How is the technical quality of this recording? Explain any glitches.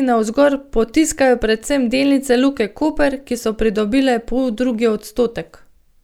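No technical glitches can be heard anywhere in the recording, and the signal stays continuous and stable throughout.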